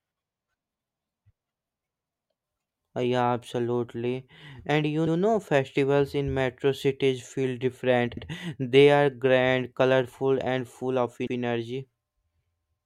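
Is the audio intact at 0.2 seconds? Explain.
Yes, at 0.2 seconds the speech plays through with no dropout, distortion, glitch or other fault to be heard.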